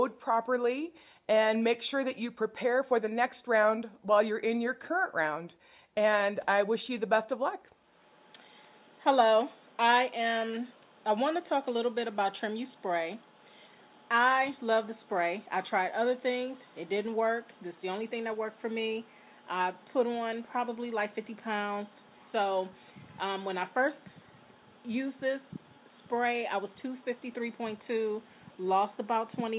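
No technical faults can be heard anywhere in the recording; the signal stays steady and intact throughout.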